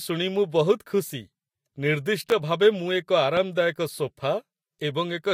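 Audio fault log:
2.30–2.34 s and 3.37–3.41 s, loud pop: two single sharp pops, each roughly 10 dB above the speech, which carries on underneath. It sounds like a sudden voltage step or pulse hitting the signal, likely from a plug, switch, static discharge or driver glitch.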